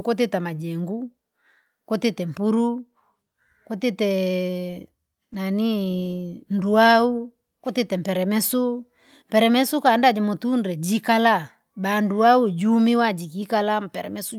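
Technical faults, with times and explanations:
No technical faults detected in this speech recording.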